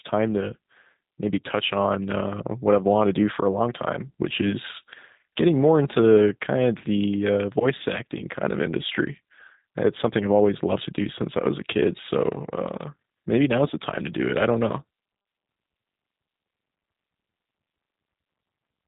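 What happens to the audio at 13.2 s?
At 13.2 s the speech sounds slightly rough and synthetic, with nothing above 4 kHz, as it does throughout the clip. This is G.729 codec damage, consistent with an 8 kbit/s stream: each 10 ms frame is rebuilt from a vocal tract filter, a pitch predictor and a few pulses.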